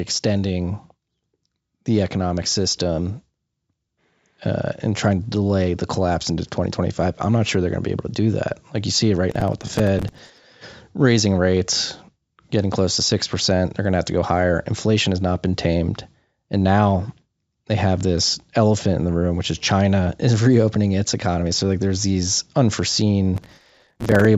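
At 9.31 to 10.44 s and again at 23.36 to 24.25 s there's processor overload crackle. The processor kept missing its deadlines on tiny buffers of about 5 ms, replaying stale audio each time, so these hard-edged repeats pile up into a gritty tearing over the speech.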